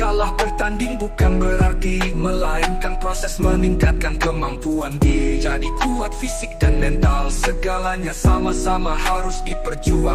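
At 2.13 s the audio jumps forward abruptly, with no gap, and about a second of material is simply missing. This is a skip ahead: a stretch was dropped, in transit or by an overflowing jitter buffer, and the audio on either side was joined almost directly. From 2.95 s to 5.76 s the sound runs slightly fast, at about 102% speed with unchanged pitch. This is jitter buffer speed-up: the receiver trimmed many short pitch-period pieces, only around 50 ms in total, to drain a buffer holding more than its target delay.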